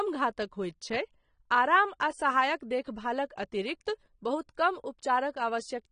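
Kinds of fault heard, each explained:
AAC compression: The speech runs throughout with nothing above 9.7 kHz, so sibilants lose their top and the sound is dull, and the codec damage is plainly audible as smeared, watery detail. The likely cause is lossy AAC-LC coding at a bitrate that fits roughly 32 kbps. The encoder splits the signal into frequency lines per frame and spends too few bits on them, discarding high bands and coarsening what remains.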